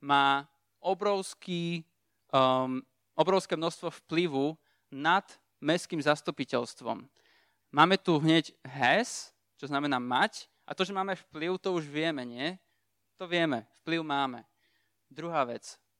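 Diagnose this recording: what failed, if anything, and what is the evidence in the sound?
Nothing failed, and the sound offers no evidence of a fault anywhere in this recording.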